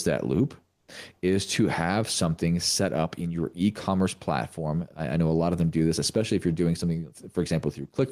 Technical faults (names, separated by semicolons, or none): gain pumping; comfort noise in place of the background